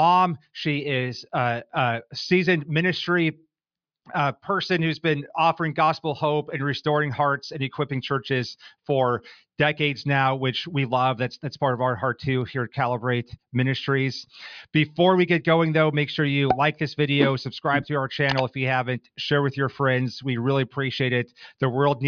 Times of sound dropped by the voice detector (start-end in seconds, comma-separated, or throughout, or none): none